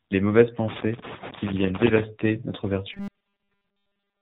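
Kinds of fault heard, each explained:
AMR narrowband mobile codec: The speech sounds buzzy, thin and synthetic throughout, with heavy coding damage and nothing above about 4 kHz, so sibilants and breath lose their sparkle. This is the narrowband mobile codec used on 2G and 3G calls. It rebuilds the voice from a vocal-tract model fed by a few pulses per subframe. The degree of artificiality fits a low mode of about 6.7 kbps, where too few bits remain to capture natural detail.
Robotic sound from repeated short buffers: From about 2.94 s to the end, the speech becomes a rigid metallic drone pitched near 200 Hz. It still follows the rough shape of the speech. The likely cause is playback starving for new data and looping the last chunk of audio, about 5 ms long, to fill the gaps. Most of the real audio in that stretch is skipped, and the steady repetition imposes the fixed buzz pitch.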